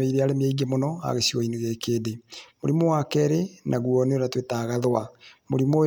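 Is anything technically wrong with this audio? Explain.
No, nothing technically wrong can be heard in this speech recording. Nothing in it points to a problem with how it was captured, processed or delivered.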